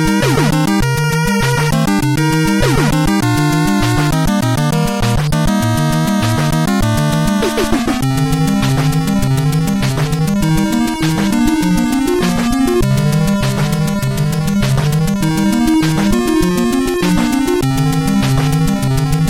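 Nothing stood out on listening; no technical problem could be heard at any point in the audio.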